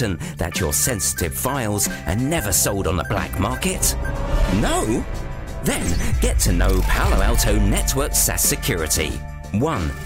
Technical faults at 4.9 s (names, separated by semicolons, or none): hard clipping